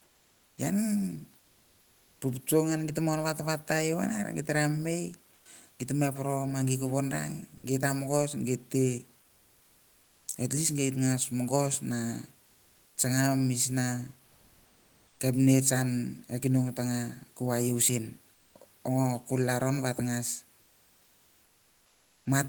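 Comfort noise replaces the background at 0.00–0.57 s, 5.35–5.45 s, 12.45–12.97 s (just after "mongos ve"), 14.25–15.19 s, 18.33–18.55 s and 20.61–22.25 s. The likely cause is discontinuous transmission in the Opus codec: the room noise, about 37 dB below the speech, gives way to a bland, even hiss, mostly about 3–6 dB quieter (not at 14.25 s). A spectrogram shows smooth, featureless texture, and the waveform shows a small step down.

At 7.57–7.63 s, sound dropped by the voice detector cuts about 50 ms of speech, likely because the detector mistook it for background. On the waveform a 60 ms stretch collapses to a flat noise floor.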